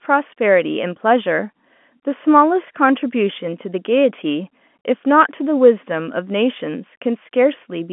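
No technical faults can be heard in this speech recording. The G.711 telephone coding confines the sound to the line band of roughly 200 Hz to 3.4 kHz, with at most a faint grain that follows the signal level.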